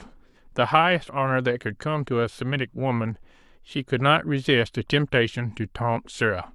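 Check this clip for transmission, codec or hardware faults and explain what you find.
Nothing faulty can be heard anywhere in this speech.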